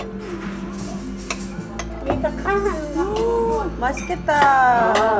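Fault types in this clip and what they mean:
No faults detected in this recording of sounds; nothing calls for action.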